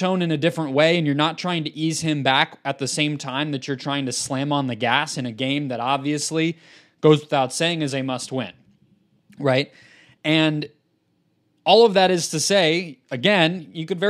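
No technical faults can be heard anywhere in the speech. Nothing in the recording calls for a timestamp or a closer look.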